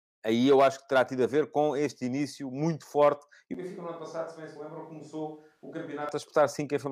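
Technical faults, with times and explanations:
3.54 to 6.09 s, switch to a distant microphone: the speech abruptly turns roomy and hollow, loses bass and drops roughly 10 dB, with room noise rising to around 35 dB below it. The close microphone likely dropped out, leaving a faraway pickup dominated by reflections.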